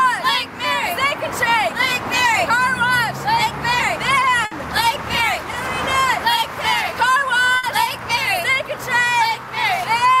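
At 4.45 s and again at 7.57 s, the sound briefly freezes into a held, fading sound for about 60 ms, then jumps ahead with a short stretch absent. Both are a burst of packet loss: several consecutive packets never arrived in time, so the receiver stretched the last good audio and let it decay to cover the hole, and playback resumed roughly 60 ms further along.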